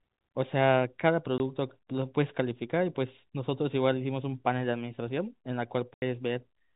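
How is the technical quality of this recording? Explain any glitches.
The recording has two dropouts where stretches of the speech go missing, heard over a telephone-band path that passes nothing above 4 kHz, as G.711 coding does.

Packet loss filled with silence occurs at 1.38 to 1.40 s and again at 5.94 to 6.02 s. Chunks of the stream never arrived, and the receiver played silence in their place. The first hole lasts 20 ms, matching a single 20 ms packet. The second lasts 80 ms, about four packets in a row. Each gap starts and ends abruptly, so the speech sounds chopped.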